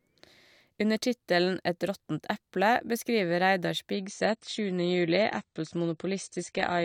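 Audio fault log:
3.93 s onward: adaptive stream at a lower bitrate. Everything above 9 kHz vanishes and codec artefacts rise, with an abrupt switch and no gap, unlike a dropout.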